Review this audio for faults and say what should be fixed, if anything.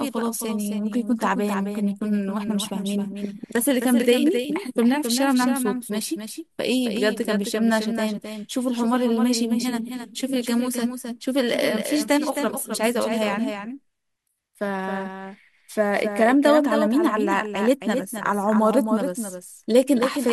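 A doubled audio track runs through the whole speech clip: a second, full-band copy trails the original by about a third of a second, somewhat quieter, with no decay or room colouring. On a waveform every burst of energy has a smaller twin offset by that fixed gap, and on a spectrogram each onset and formant pattern repeats as a somewhat weaker, identical ghost to its right. The likely cause is the signal being captured a second time through a slower path. Route each source only once into the mix.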